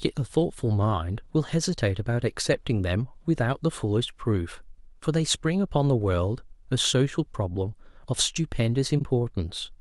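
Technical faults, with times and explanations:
8.98 to 9.04 s, frames out of order: right near the end there's a brief garbled flutter where two neighbouring chunks of the speech got swapped and decoded in that order, so the later bit plays before the earlier one. Each half is around 23 ms, which fits a single frame apiece. Nothing's actually missing and the timing stays intact.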